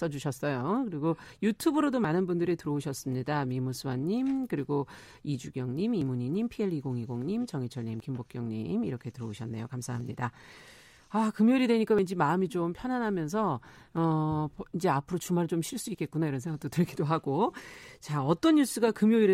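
Brief skips at 2.05, 6.02, 8.00, 10.01, 11.99 and 13.97 s come from overlap between stream segments. The boundaries fall on a 2-second grid, where overlapping timestamps made the player trim a few milliseconds of genuine speech. The waveform shows an abrupt step, and the spectrogram a thin vertical broadband line.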